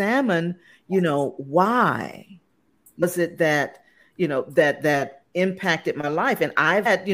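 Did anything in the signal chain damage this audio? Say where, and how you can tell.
Yes: brief glitches at 3.02 s and 6.85 s show damaged data in the compressed stream, where corrupt codec frames made the decoder misread them and lose sync.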